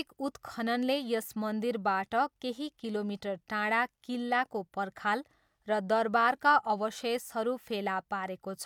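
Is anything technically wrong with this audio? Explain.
No technical faults are audible.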